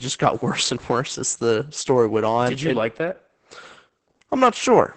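Opus voice compression runs throughout: a low-rate SILK coding, probably near 10 kbps, leaves speech muffled, hoarse and robotic, empty above 9 kHz, unlike plain low-pass dullness.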